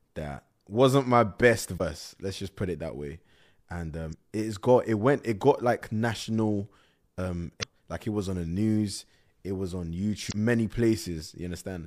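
Damaged data in the compressed speech stream makes the decoder misread frames and lose sync, giving brief blips at 1.77–1.81 s after "that wasn't my best", 4.09–4.14 s before "it's got it went", 7.59–7.64 s between "got like national um" and "like it was on", and 10.28–10.33 s.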